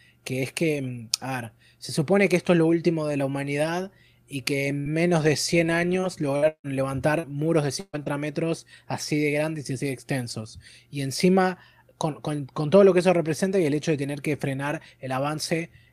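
From 4.79 to 4.91 s there is a burst of packet loss. About 62 ms is filled by stretching the last sound, and about 60 ms of speech is skipped.

Within it, from 4.86 to 4.88 s, one lost packet is rebuilt from error correction. That 20 ms sounds rougher and noisier.

From 6.00 to 8.08 s, repeated packet loss makes the speech choppy and robotic. Six gaps occur, the longest 159 ms, and about a fifth of the span is patched.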